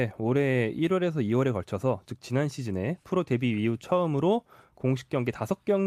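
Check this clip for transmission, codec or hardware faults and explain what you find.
I checked the clip and found no faults to explain.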